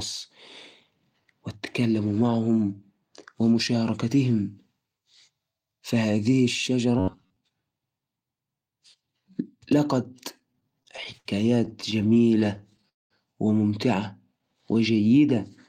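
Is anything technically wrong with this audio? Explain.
Yes, there are four kinds of fault in this speech clip.

From 6.99 to 7.37 s there is robotic sound from repeated short buffers. Audio most likely arrived too seldom, so the last fragment of roughly 10.7 ms was replayed over about half the span while real audio was skipped. The repetition forces a rigid, metallic buzz at 93.8 Hz onto the speech.

Repeated stalls (stutter) occur in two bursts. From 10.39 to 11.27 s, packets fell behind 11 times and the receiver filled 180 ms by extending the last sound, with the longest wait at 75 ms. From 11.65 to 12.85 s, 18 shorter stalls, none over 17 ms, added 177 ms. Nothing is lost, but the speech drags and catches.

From 12.89 to 13.12 s there is a call audio freeze, likely from packets held up in transit until the jitter buffer ran dry. The receiver bridges 215 ms, and 190 ms of that is silence, before the speech resumes where it stopped about 215 ms late.

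From 14.33 to 15.35 s, a jitter buffer slow-down adds 112 ms as the receiver rebuilds its reserve by repeating single pitch periods and bits of pauses. The speech runs at about 90% speed without a change in pitch, so sounds are drawn out.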